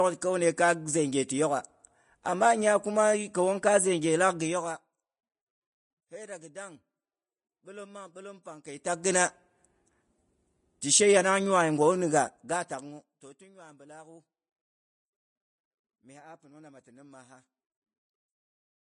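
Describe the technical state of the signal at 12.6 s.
At 12.6 s a rapid ticking, a zipper noise, rides on the speech from 12.10 to 13.45 s while the level falls by roughly 25 dB. The gain is moving in coarse, unsmoothed steps, around a hundred a second, and each jump leaves a small click.

Underneath, the speech sounds plainly grainy and hissy, with roughened tones, smeared onsets and nothing above 10.5 kHz. The likely cause is Vorbis compression at a low bitrate, near 25 kbps, with the treble coarsely quantised into noise.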